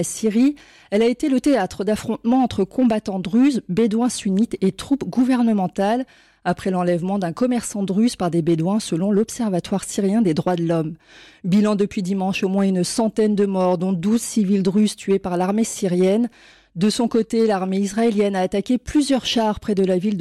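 From start to finish there's hard clipping: the signal is being pushed about 4 dB past what the stage can pass, so peaks get sliced flat. Only a small share of samples hit the ceiling, so you hear crackle on the peaks rather than constant fuzz.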